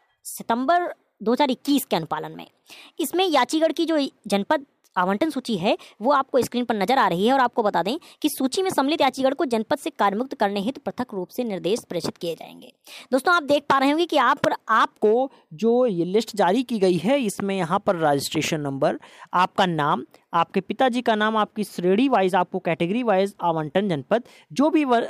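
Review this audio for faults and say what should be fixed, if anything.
From 0 to 14.93 s, a section at the wrong speed, likely from a clock mismatch, plays 1.17 times fast, so the sound is hurried and pitched about three semitones high. To prevent it, confirm that every editing and playback stage uses the same sample rate before rendering.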